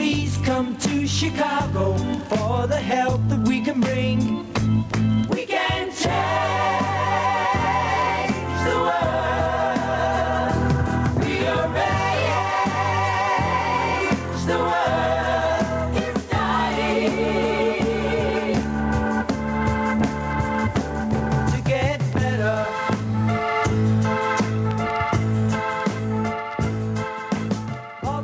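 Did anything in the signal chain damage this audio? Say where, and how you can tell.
Yes. Gain pumping runs through the whole clip, with the level swinging by around 20 dB. Loud and quiet passages sit unnaturally close together, giving a squashed, breathing quality. This is likely an input gain set far too high, with a fast limiter or compressor clamping down on each peak and releasing in the pauses. The call's microphone processing, which leaves nothing above 8 kHz, does not cause it.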